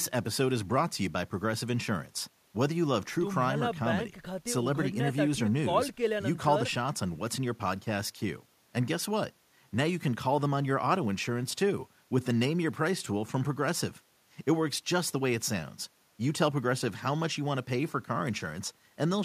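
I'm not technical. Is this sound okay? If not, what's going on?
Yes, this recording sounds fine, with no technical problems to point out. There is nothing in it that needs fixing.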